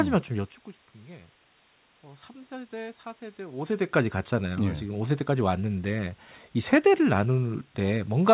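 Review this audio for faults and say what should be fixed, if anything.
Nothing in this audio needs to be fixed, since no faults turn up anywhere in it.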